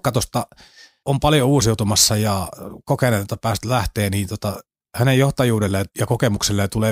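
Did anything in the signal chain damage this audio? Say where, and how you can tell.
Yes: sample clock jitter at the converter, roughly a few microseconds, adds hiss-like roughness about 30 dB below the speech throughout, loudest on bright, loud passages, gone in pauses.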